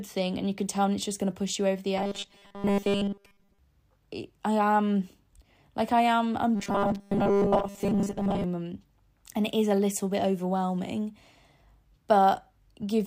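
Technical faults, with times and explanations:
1.98 to 3.59 s, robotic sound from repeated short buffers: audio likely arrived late, so 5 ms snippets looped, forcing a rigid 200 Hz metallic buzz onto the speech.
6.55 to 8.44 s, robotic sound from repeated short buffers: delayed input likely left gaps filled by looping 5 ms chunks, replacing most real audio with a fixed 200 Hz buzz.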